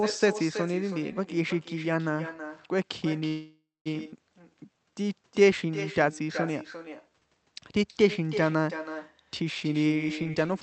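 A speech recording carried over a call link, with an echo with no canceller present from start to finish. Every phrase is followed about a third of a second later by a weaker, thinner copy, sitting about 11 dB below the direct speech. That is the far end's loudspeaker output being picked up by its own microphone and sent straight back, with no echo cancellation removing it, so the talker's own sound returns after a full network round trip. At 3.27 s the audio stalls in a call audio freeze lasting until 3.88 s. For roughly 0.58 s the receiver fills the hole, first by stretching the last sound into a fading buzz or hiss, then with about 0.2 s of silence, before speech resumes exactly where it left off. Nothing is lost, but a gap is inserted. The likely cause is packets held up in the network until the jitter buffer ran dry. At 4.12 s there is a skip ahead. Playback jumps forward with almost no gap, and about 0.3 s of speech is gone, the material on either side butted together. 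Later packets were already queued, so a stretch was discarded rather than waited for, which takes back about 0.3 s of the extra delay the freeze had built up. From 4.36 s to 7.27 s a jitter buffer slow-down plays the speech at about 90% speed with unchanged pitch, adding roughly 310 ms in total. The receiver repeats single pitch periods and slivers of pauses over and over to rebuild its reserve, so sounds come out drawn out. From 9.63 s to 10.61 s a jitter buffer speed-up runs the other way, at about 141% speed and again at the same pitch, with around 0.4 s cut out. The buffer was holding more audio than its target, so it trimmed short runs of pitch periods repeatedly, and the speech sounds rushed. Under all of this the Opus call path adds its normal coding noise and limits the audio to content below 8 kHz.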